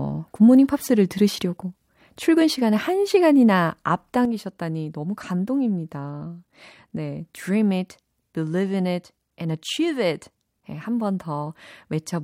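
At 4.25 s the speech drops abruptly by about 6 dB and stays at that lower level to the end of the clip. The likely cause is one channel dropping out: one stereo channel stopped carrying signal, so when the two are summed to mono, the shared content loses half its contribution. Unlike a fader move or automatic gain change, the step is instantaneous and exactly one channel's share. Unlike a full dropout, the sound never goes silent.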